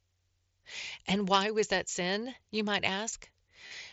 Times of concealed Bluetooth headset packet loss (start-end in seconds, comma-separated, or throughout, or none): 3.67-3.71